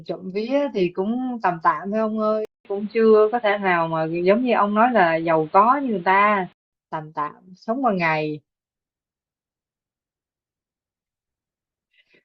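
At 2.45 s a 200 ms gap leads into boxy speech until 6.73 s, likely an input switched to a poorer device. The spectrogram shows nothing above 4.5 kHz, and the waveform level shifts.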